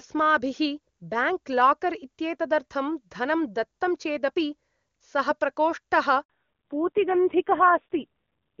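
Speech, carried as HD Voice on AMR-WB at a rate high enough that it sounds clean. At 6.24 s there is a handover gap. The call switches networks and no speech frames arrive. The sound cuts out for 60 ms, until 6.30 s, and that stretch is lost. From 6.30 s to the end comes a fallback to narrowband. Nothing survives above 4 kHz, so the speech turns dull and rough. The raspy texture fits a drop to AMR-NB at a low rate near 5.9 kbit/s.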